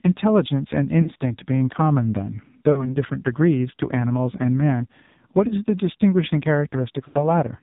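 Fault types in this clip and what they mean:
AMR narrowband mobile codec: everything sits below 4 kHz with a heavy buzzy, synthetic edge, which fits a low AMR-NB mode near 6 kbps.
lost AMR speech frames: the decoder papers over missing frames with a short smeared dip or warble at about 1.0, 2.7, 5.5 and 7.1 s.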